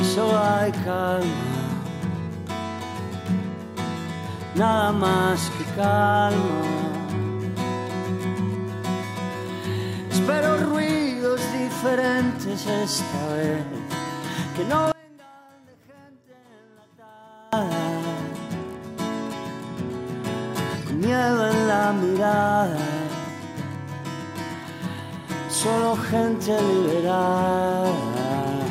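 From 14.92 to 17.53 s the sound collapses to a faint trace, about 28 dB quieter, with centred material and bass almost gone. The likely cause is one channel inverted: one side's polarity is flipped, so what both channels share cancels when summed to mono, leaving only their small difference. Unlike a plain level dip or dropout, which lowers everything evenly, this removes the common content and keeps a faint residue.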